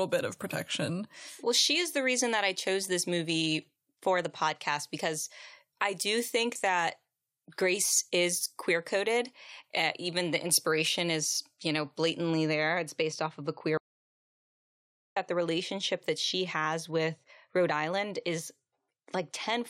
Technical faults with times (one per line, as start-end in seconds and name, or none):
0.00-12.30 pre-emphasis left on
13.78-15.16 audio dropout to silence